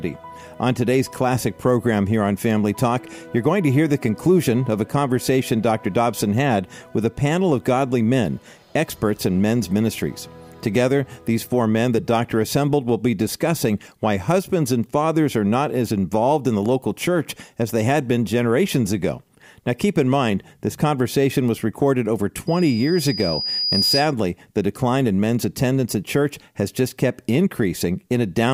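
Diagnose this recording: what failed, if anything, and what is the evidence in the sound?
A single piercing tone near 4.9 kHz swells from 22.47 s over about a second and a half until it is roughly as loud as the surrounding audio, then stops at 24.14 s. This is loudspeaker feedback squeal in the acoustic loop: the microphone re-captured its own loudspeaker, and loop gain above one at that frequency let it build.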